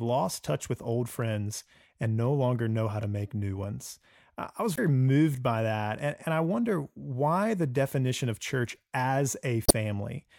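Damaged data in a compressed stream disrupts this speech twice. At 4.74 to 4.80 s, after "new ones I was" and before "moved by that", corrupt bytes cause the decoder to misread its frames and lose sync while hunting for the next valid header, producing a short chirp, squawk, click or hole. The same happens at 9.66 to 9.73 s, just after "definition of church as", leaving another brief disruption where clean decoded audio should be.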